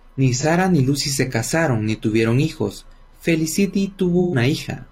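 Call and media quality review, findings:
AAC frame loss with concealment at 0.35–0.45 s and 4.19–4.35 s. Speech smears into a brief noisy, phasey patch as the decoder rebuilds missing frames from the last good spectrum. The first gap, about 43 ms, fits one lost frame. The second, 128 ms, fits roughly three.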